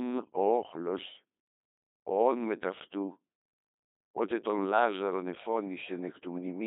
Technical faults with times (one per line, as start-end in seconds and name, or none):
0.00-6.66 Codec 2 vocoder